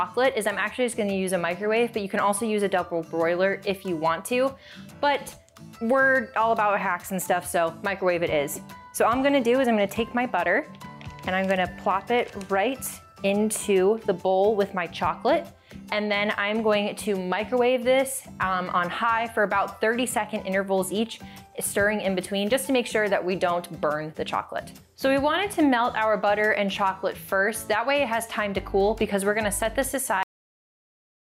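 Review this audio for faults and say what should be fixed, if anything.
A cut-off end hits at 30.23 s. The sound stops mid-event and falls straight to digital silence, with no natural decay. The final buffers were never written or played out. To prevent it, flush and close the recording stream properly before stopping.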